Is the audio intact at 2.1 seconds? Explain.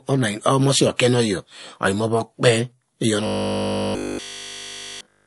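No. Throughout the speech, including 2.1 s, the likely cause is heavy MP3 compression, consistent with a low bitrate near 48 kbps. Starved of bits, the encoder cuts the treble and drops weak frequency lines frame to frame, leaving a watery, swirling sound with metallic chirps on s sounds.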